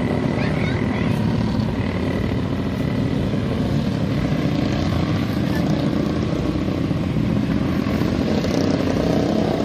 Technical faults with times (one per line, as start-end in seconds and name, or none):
2.58-2.72 repeated frames